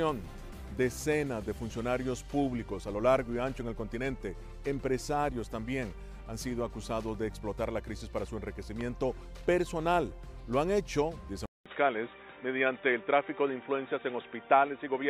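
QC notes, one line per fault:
8.81 to 8.83 s, loud pop: a single sharp pop about 10 dB above the surrounding sound, lasting only a couple of hundredths of a second while the audio carries on underneath. The likely cause is a sudden voltage step or pulse entering the signal chain, such as static discharge, a switch or plug being handled, or a driver glitch. The circuitry after it shapes that step into the brief, hard transient heard here.
11.46 s to the end, input switched to a poorer device: after a gap of about 200 ms, the sound comes back dull and boxy, with nothing above 3.8 kHz. The level shifts by about 5 dB and a new noise floor appears about 50 dB below the signal. This likely means the system changed inputs mid-recording, for example to a different microphone or a headset's call profile. That device's narrow band, different gain and self-noise replace the original input's character.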